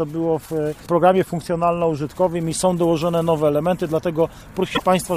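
Damaged data in a compressed stream shows up from 4.72 to 4.82 s, near the end of the clip, as a burst of garbled sound roughly a tenth of a second long that breaks into the audio. Part of the encoded stream at that point is corrupt, whether lost, zeroed or overwritten bytes. The decoder misreads or rejects the affected frames, falls out of sync, and has to hunt for the next valid frame header before clean playback resumes.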